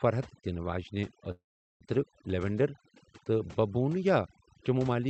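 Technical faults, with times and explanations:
Throughout: overdone noise removal. Bands near the noise estimate are pushed down, leaving near-silent gaps with twinkling specks rather than broadband hiss.
1.31–1.84 s: call audio freeze. The sound briefly carries on, then falls silent for about 0.39 s, likely because the jitter buffer ran empty. Audio resumes exactly where it stopped, so nothing is lost.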